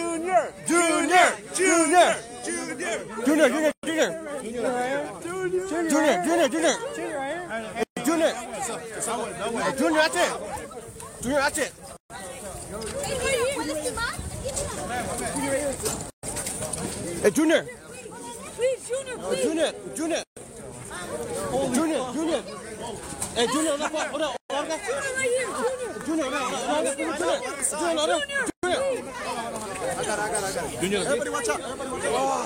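Separately encoded pieces of roughly 4 seconds each were joined without trimming, so every encoder's leading delay and padded final frame remain at each seam. The result is a gap at a join of encoded pieces, a hole of silence cutting into continuous sound at 3.72, 7.83, 11.97, 16.10, 20.23, 24.37 and 28.50 s. The first lasts 118 ms and the rest 133 ms each, with smeared edges. Each time, the sound resumes exactly where it stopped.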